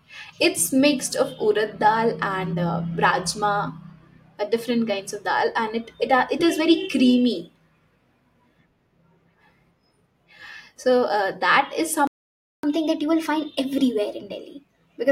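At 12.07 s, just after "that is", the speech cuts to silence. This is a playback stall. The gap lasts about 0.56 s, until 12.63 s. The player likely ran short of data or was blocked, so nothing reached the output.

From 12.63 s to the end, the speech runs fast. This is catch-up at higher speed. The player resamples its backlog at 1.1 times normal speed. Pitch rises with it, by roughly a semitone and a half. The sound turns slightly hurried and bright.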